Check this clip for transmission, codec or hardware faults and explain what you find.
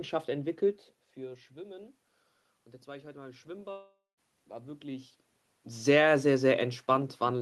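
One transmission fault appears in the speech. Long network dropout, 3.71 to 4.19 s: about 460 ms likely never arrived, so the last sound fades into a buzz, then silence, and speech returns with a gap.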